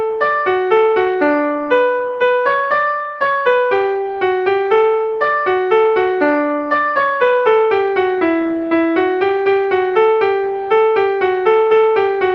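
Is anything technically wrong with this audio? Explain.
No, nothing in this audio stood out as a technical problem on listening.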